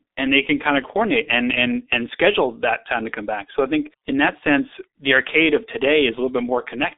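From start to finish the speech carries G.723.1 codec damage, and it is heavy. Nothing reaches above 3.8 kHz, and the band sits roughly between 250 Hz and 3.7 kHz, so the voice is muffled and thin. Unlike a clean telephone band-limit, it also sounds hoarse and smeared, with consonants blurred. The 30 ms frames update the voice model too slowly to follow fast changes, which fits the 6.3 kbit/s mode.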